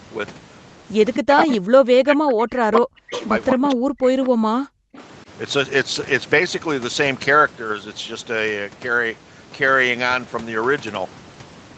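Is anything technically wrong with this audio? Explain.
Yes. Between 1.16 and 3.12 s, and again from 3.54 to 4.8 s, the speech is suppressed in double talk. The level drops in chunks, by as much as about 40 dB at its deepest, likely because an echo canceller mistook the overlapping talk for loudspeaker echo and attenuated everything.

There is also echo leak at 1.38–1.57 s, 3.12–3.22 s, 3.5–3.68 s and 4.24–4.29 s. A short, delayed copy of the speech arrives about 257 ms late, roughly 10 to 20 dB below the direct sound. This is likely residual loudspeaker pickup that the far end's canceller failed to remove.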